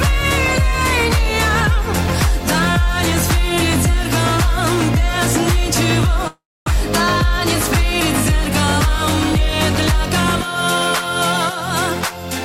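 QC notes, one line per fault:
6.27–6.77 s, long network dropout: the sound smears into a fading buzz that tails off into roughly a quarter second of silence, likely a stalled stream the receiver padded over. About 0.3 s is lost, and playback resumes around a tenth of a second late.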